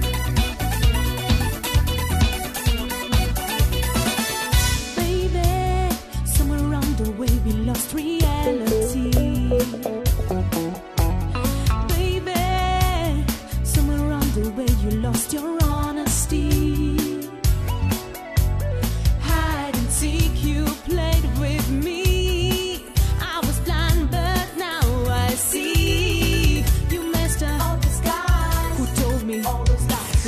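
Nothing in the audio is technically wrong.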